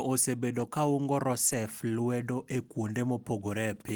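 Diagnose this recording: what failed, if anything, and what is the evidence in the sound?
Network loss, patched by the codec: lost packet rebuilt from error correction around 0.59–0.61 s and 1.47–1.53 s, just before "lwedo e". No gaps, just briefly rougher, noisier low-bitrate copies filling in.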